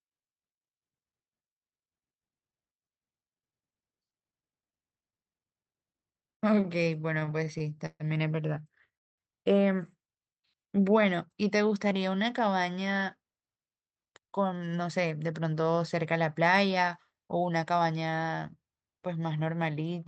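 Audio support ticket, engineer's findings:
Repeated stalls (stutter), 6.27 to 8.03 s. Audio drags and catches in about 18 short gaps, longest 138 ms. Jitter buffer kept running dry. Receiver stretched the last sound to cover about 365 ms, roughly a fifth of the span. Nothing lost.

Call audio freeze, 8.97 to 9.21 s. Sound stops, then goes silent for about 200 ms before resuming where it left off. Likely packets held up in transit, emptying the jitter buffer. Gap inserted, nothing dropped.

Jitter buffer slow-down, 10.36 to 11.95 s. Audio runs at 91% speed with pitch unchanged. Drawn-out sounds. Buffer was rebuilding its reserve by repeating single pitch periods, adding 145 ms in total.

Jitter buffer speed-up, 13.69 to 17.93 s. Audio sounds hurried at 110% speed with pitch held. Buffer was over target and trimmed pitch-period pieces to shed about 0.4 s. Top end stops near 8 kHz, consistent with the Opus call path.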